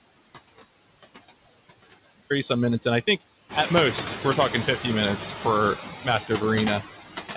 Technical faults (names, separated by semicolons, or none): noise suppressor artifacts; audio dropout to a faint residue; noise suppressor catching up; speech cut by the noise suppressor